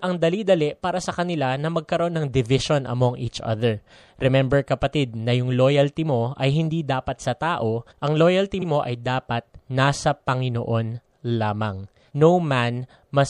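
Across the whole recording, the speech has most likely passed through MP3 compression at a low bitrate, plainly audible and consistent with roughly 64 kbps. Short of bits, the encoder has cut off the upper treble and dropped weaker frequency detail that comes and goes between frames. The result is a watery, swirling quality, with metallic chirps on s sounds and softened, smeared consonant onsets.

From 8.61 to 8.66 s come repeated frames: a 52.2 ms block of compressed data was decoded twice, which fits two MP3 frames played again. The speech stutters as that fragment sounds a second time. The clip runs 52.2 ms longer than the original.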